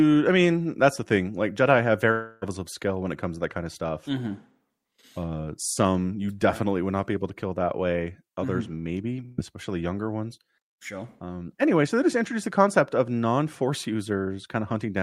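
From 2.11 to 2.45 s the speech gives way to a smeared, fading buzz or hiss lasting about 0.3 s, with no true silence, before it resumes at "of skill when it" with roughly 300 ms of speech gone. This is likely a long network dropout: audio stopped arriving, so the receiver stretched the last sound to fill the gap and then skipped ahead, and the missing stretch was never played.

At 9.26 to 9.40 s a shorter fading buzz or hiss of about 120 ms replaces the speech just before "especially younger ones", again with no gap of silence. This is a burst of packet loss: a run of consecutive packets failed to arrive in time. The receiver continued the last sound, turning it down across the gap, and then resumed further on without the roughly 120 ms that was lost.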